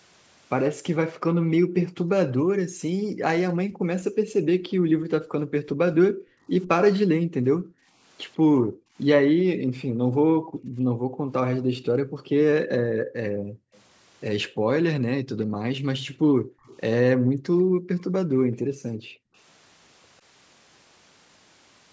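Background gated by the echo canceller first appears from 1.04 to 6.49 s. While the far end's audio played from the loudspeaker, the echo canceller clamped the microphone down by up to about 40 dB, so the room tone sinks or vanishes beneath the speech for stretches of roughly four seconds and then returns once the canceller releases.

Echo leak intrudes at 1.81 to 1.89 s, inside that gated stretch. A brief scrap of speech comes back 148 ms late and fairly strong, only about 10 dB below the main speech. This is likely loudspeaker sound that the echo canceller failed to remove fully and that was sent back down the line.

The gating recurs at 7.08 to 7.89 s for under a second and at 8.46 to 13.73 s for roughly four seconds. Each time, the background drops away by as much as about 40 dB.

Right at 13.73 to 13.80 s, as that gated stretch ends, another echo leak surfaces. It has the same 148 ms delay but is very faint, around 35 dB down.

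Gating returns at 14.48 to 16.64 s, with the room sound pulled down for about a second and a half. An echo leak follows at 16.64 to 16.77 s, again delayed by 148 ms and faint at about 25 dB below the speech.

The final gated stretch runs from 17.01 to 19.35 s and removes the background for roughly two seconds before it comes back.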